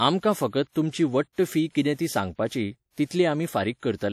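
Across the whole speech clip there is plainly audible WMA compression, likely from an encoder at a low rate that fits around 48 kbps. Long transform blocks smear quantisation noise over tens of milliseconds, giving a ringing, washy tone and hiss that swells with the voice. A spectrogram shows blotchy, gappy upper bands where weak components were zeroed, though energy still reaches 20.1 kHz.

From 3.05 to 3.11 s comes pre-echo: an attack lands late in a coding block, so noise scaled for the loud onset fills the 55 ms of quiet before it. It is heard as a brief hiss leading a softened attack, and the waveform shows a noise smear ahead of the transient.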